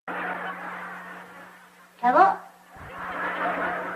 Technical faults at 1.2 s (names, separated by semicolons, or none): none